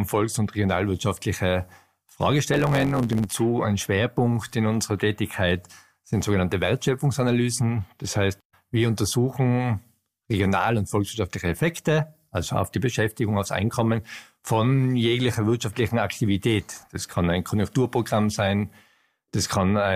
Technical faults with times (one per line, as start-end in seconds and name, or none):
2.52-3.28 block size mismatch (truncated)